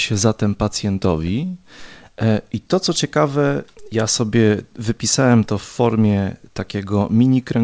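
No faults can be heard in this speech clip. It has passed through a WebRTC call path, and nothing is present above 8 kHz, which fits a wideband call codec such as G.722.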